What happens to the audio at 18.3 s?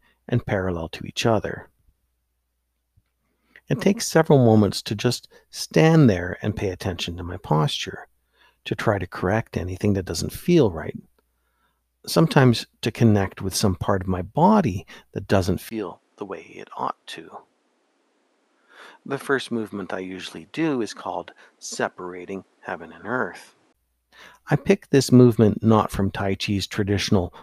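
At 18.3 s the speech sits within a stretch from 15.69 to 23.75 s that sounds like the input switching to a poorer device, likely another microphone. After a 20 ms gap, the level falls about 10 dB, nothing remains above 11.6 kHz, and a new noise floor sits roughly 35 dB down.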